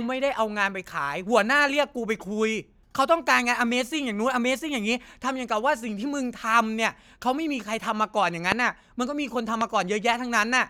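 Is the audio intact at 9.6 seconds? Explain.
No. A loud pop sits at 9.61 to 9.63 s, likely a voltage pulse such as a switch or static discharge entering the signal. It cracks out well above the speech, which continues beneath. On the waveform it is a lone spike; on the spectrogram, a thin full-height vertical stripe.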